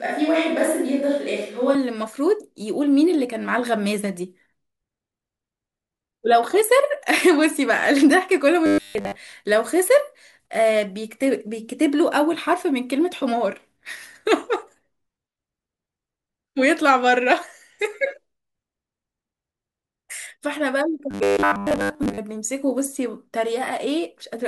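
The opening, already under way and lasting until 1.75 s, sounds roomy and hollow with thin bass, little change in level and faint background noise, likely a switch to a distant microphone.

From 8.66 to 9.15 s and again from 21.11 to 22.18 s, the speech turns into a rigid metallic buzz at 100 Hz. This robotic sound likely comes from repeated short buffers of about 10 ms that replace most of the real audio.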